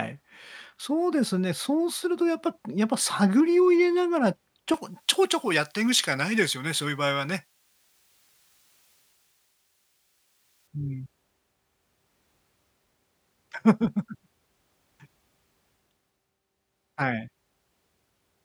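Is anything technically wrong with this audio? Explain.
Yes. From 4.74 to 10.67 s the speech has pre-emphasis left on: the J.17 treble boost was applied without its matching de-emphasis, lifting 10 kHz about 11 dB above 1 kHz. It sounds thin, bright and hissy on sibilants.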